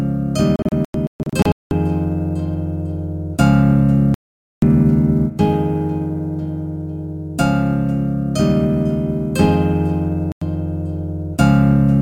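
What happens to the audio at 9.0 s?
At 9.0 s the audio carries sample clock jitter, which runs through the whole clip rather than starting there. The converter's timing wanders by a few microseconds, so each sample lands slightly off. Steep, bright parts of the waveform suffer most. The result is a faint hiss or grit, roughly 40 dB below the sound, that swells with loud, high content and disappears in quiet passages.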